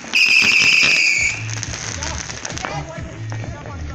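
At 2.44 s, compressed frames are skipped: about 50 ms of audio never plays, so the sound jumps ahead.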